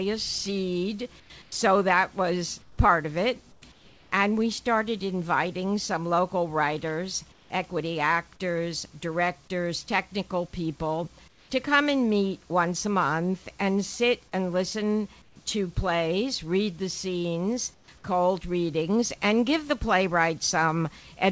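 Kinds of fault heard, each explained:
Comfort noise in place of the background: in seven short gaps the real background drops out, replaced by steady, featureless hiss, in five of them about 6 to 9 dB quieter, likely discontinuous transmission.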